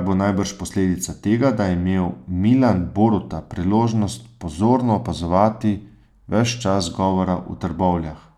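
Nothing technically wrong turns up anywhere in this bit of speech, so there's no moment or cause to point to here.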